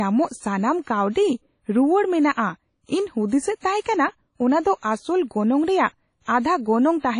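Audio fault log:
throughout: likely WMA compression; the speech rings and smears, hiss breathes with it, and nothing sounds above 10.1 kHz, which points to about 32 kbps, unlike steady background hiss.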